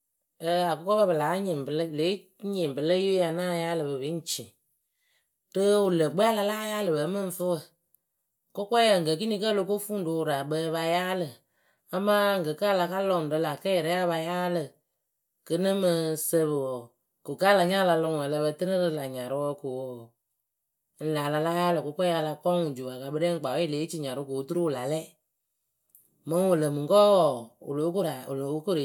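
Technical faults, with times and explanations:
No technical faults are audible in this speech recording.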